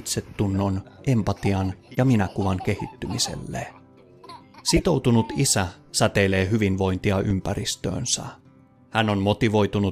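Corrupt frame decoded at 1.94–1.97 s, 4.76–4.82 s and 7.30 s: damaged compressed frames played anyway, giving brief chirps or noise bursts, faint first, then two much louder.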